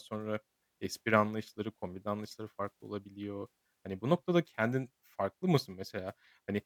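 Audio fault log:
Nothing stood out on listening to this speech recording.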